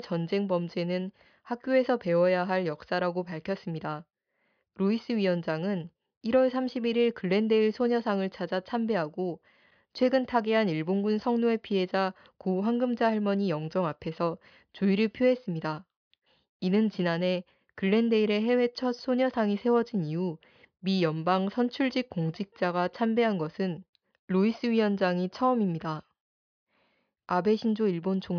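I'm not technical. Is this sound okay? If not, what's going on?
Yes, the recording is technically sound, with no faults to hear anywhere in it.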